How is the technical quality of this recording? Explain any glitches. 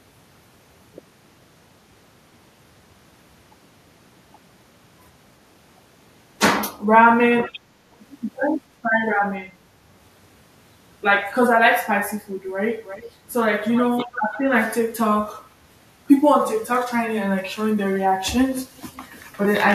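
The recording has one recurring glitch, a leaking echo.

Echo leak appears at 12.84–13.11 s, 13.64–13.90 s, 14.12–14.37 s and 18.77–19.01 s. Each time, a faint copy of the speech returns about 335 ms behind the original. This is likely a far end playing the call on a loudspeaker, where the echo canceller let part of the microphone pickup through. The echoes are short scraps, roughly 15 dB below the speech in the first two, weaker in the third, and about 30 dB below in the last.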